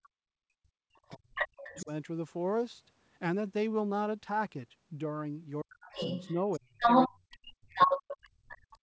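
This speech clip comes from a call in which the echo canceller likely failed to cope with a loudspeaker playing the far end back into the microphone, so there is both the other side's voice leaking through and speech suppressed in double talk. The leaked far-end voice first appears as a faint scrap at 0.03 to 0.08 s, about 30 dB under the talker. It returns at 1.06 to 1.86 s at nearly the talker's level, then from 5.92 to 7.38 s about 10 dB louder than the talker, and again at 7.75 to 8.58 s, somewhat louder than the talker. Where the two sides overlap, the canceller could not tell the near voice from the echo and pulled everything down. The talker's voice is pushed down by roughly 40 dB at its deepest over most of 0.21 to 1.89 s, briefly at 5.62 to 5.96 s, and from 6.44 s to the end. The band stops at 8 kHz, which fits the wideband call path.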